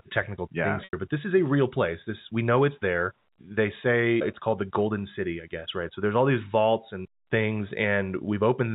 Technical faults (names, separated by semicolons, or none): packet loss with pitch repetition